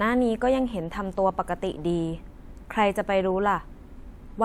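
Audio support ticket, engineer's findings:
No faults found in this speech audio; nothing to report for the ticket.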